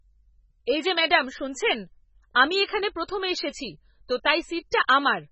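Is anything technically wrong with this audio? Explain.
Yes. MP3 compression runs through the whole clip. Nothing sits above 8 kHz, the hard treble cut-off of a likely MP3 encode starved of bits, fitting about 16 kbps. Weak frequency lines flicker between frames, so the speech sounds heavily watery and swirly, with smeared onsets and metallic s sounds.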